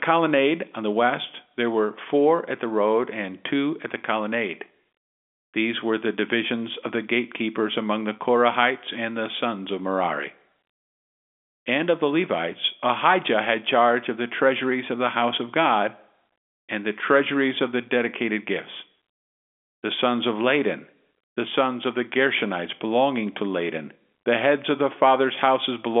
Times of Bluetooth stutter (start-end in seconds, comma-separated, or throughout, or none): none